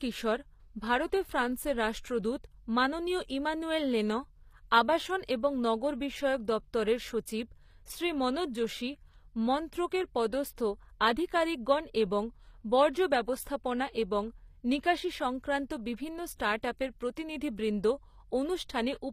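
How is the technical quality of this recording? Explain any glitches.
The recording carries plainly audible codec damage from start to finish. Throughout, the sibilants sound gritty and lispy, with treble that stays bright yet feels synthetic and stops near 15.5 kHz. That points to HE-AAC compression, likely at a low rate around 24 kbps: the upper band is rebuilt from copied lower harmonics rather than coded, which sets it apart from a plain low-pass that would simply sound dull.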